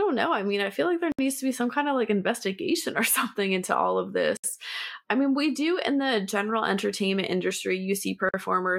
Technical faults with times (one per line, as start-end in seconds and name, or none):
1.12-1.19 gap at a join of encoded pieces
4.37-4.44 gap at a join of encoded pieces
8.29-8.34 gap at a join of encoded pieces